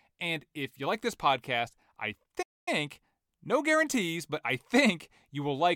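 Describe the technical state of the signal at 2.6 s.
At 2.6 s you're right inside a playback stall: the speech cuts out just after "like this podcast I" at 2.42 s and stays dead silent until about 2.68 s, so roughly a quarter of a second of nothing mid-phrase. It sounds like the talker froze rather than paused naturally. The likely cause is the player starving for data or its output thread getting blocked, so nothing reached the output until it caught up.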